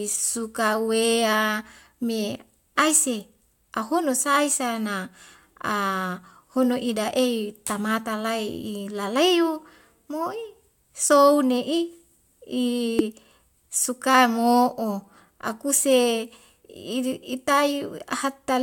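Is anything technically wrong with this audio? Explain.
Yes. From 12.99 to 13.01 s there is damaged data in a compressed stream: corrupted bytes make the decoder lose frame sync, giving a brief glitch.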